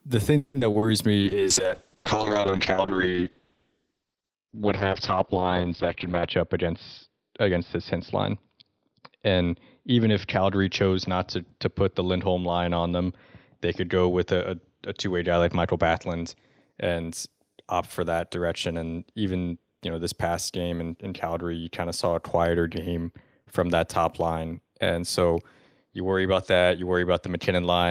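A speech clip with three kinds of technical fault. From 0.37 to 0.84 s there is repeated packet loss, heard as choppy, robotic sound. Four gaps fall in that half second. About half the span is concealed sound, roughly 240 ms in all, with the longest gap 170 ms. The receiver covers each hole by extending the last sound, and another hole soon follows. About 80 ms is simply missing. From 1.22 s a call bitrate drop sets in. The encoder falls from 32 to 6 kbps. Coding turns coarse, and the bandwidth narrows from 20 kHz to 6 kHz, so the speech grows rough and muffled. It sits at the lowest rate for about 5.1 s, then clears by 16.67 s. Two jitter buffer speed-ups follow, from 6.08 to 6.68 s and from 7.20 to 8.34 s. The buffer had built up too much delay. The receiver cut many short pitch-period pieces, around 50 ms and 70 ms in total. Speech runs at 108% and then 106% speed, hurried but at the same pitch.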